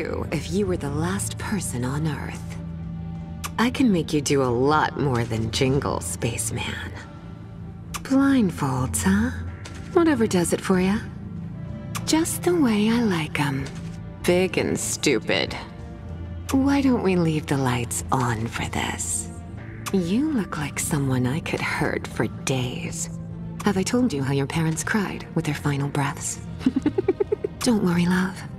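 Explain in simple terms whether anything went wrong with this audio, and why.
From 22.59 s to the end, the audio suddenly runs about 1.53 times faster, a time-stretched section. The cause is likely software squeezing that part to fit a set length, cutting out tiny slices so the pitch stays the same. That is what sets it apart from a tape or playback sped up as a whole, which would also sound higher. Here the pitch holds steady while the pace jumps, and the audio turns rushed.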